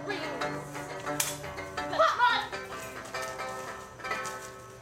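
No technical faults can be heard anywhere in it.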